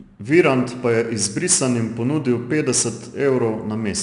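4-bit ADPCM compression runs through the whole speech clip. Each sample is coded as a coarse 4-bit step from a predicted value, with the step size adapting as it goes, so the error rides along with the signal as a gritty hiss that rises on every loud syllable and is plainly audible. Nothing reaches above 10.6 kHz, which points to a sample rate near 22 kHz and a bitrate around 89 kbps.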